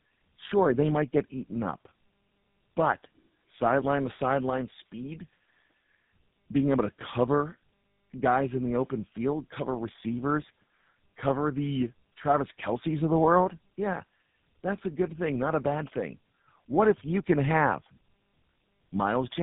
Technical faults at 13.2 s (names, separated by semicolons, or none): tandem speech coding